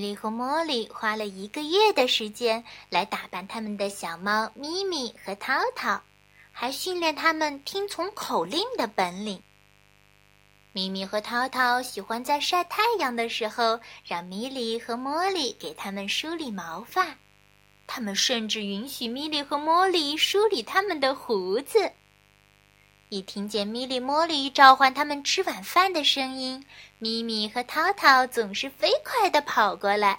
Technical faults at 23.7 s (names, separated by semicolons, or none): mains buzz